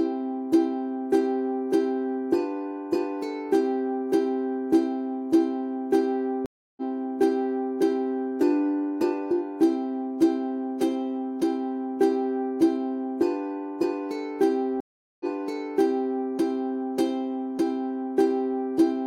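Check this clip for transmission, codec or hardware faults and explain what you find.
Two stream reconnect faults, at 6.46–7.74 s and 14.80–16.18 s. Each time the connection dropped and the player went silent, for 310 ms and then about 0.4 s. It reconnected, and a fresh decoder restarted mid-stream on a resent burst, so the sound resumes 0.98 s earlier and repeats that stretch.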